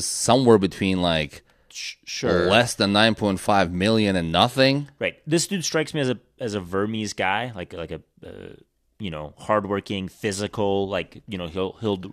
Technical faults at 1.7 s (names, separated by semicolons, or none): none